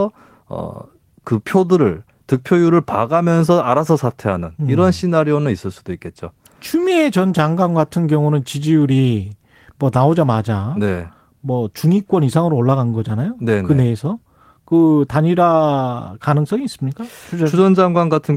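There are no technical faults to describe at any point in the clip.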